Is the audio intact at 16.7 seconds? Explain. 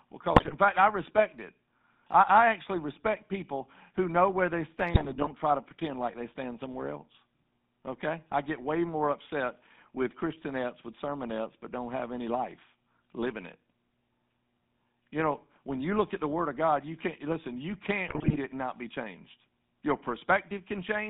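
No. At 16.7 seconds the speech has a buzzy, gravelly roughness and sounds boxed in, with nothing above about 3.7 kHz and little below 150 Hz. This persists through the whole clip. It is GSM full-rate codec damage, plainly audible, and the coarseness fits a 13 kbps rate. The codec models the vocal tract and drives it with regularly spaced pulses, keeping only a fraction of the excitation detail, which produces that rasp.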